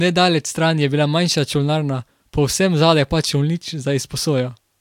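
No technical faults can be heard anywhere in this speech recording.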